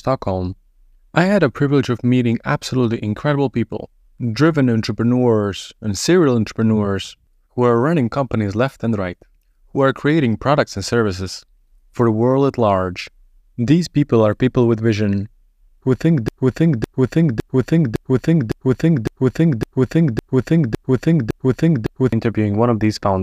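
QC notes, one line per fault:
16.28–22.13 s, broken-record loop: playback or streaming likely stalled after "with vision who think" and kept resending the last fragment it held, so a 0.56 s piece repeats exactly, back to back, ten times, and the speech due in those nearly six seconds is lost.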